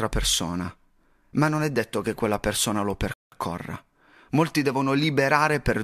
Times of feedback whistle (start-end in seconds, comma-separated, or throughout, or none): none